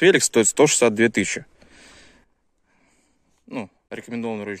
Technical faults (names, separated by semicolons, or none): sudden gain jump; corrupt frame muted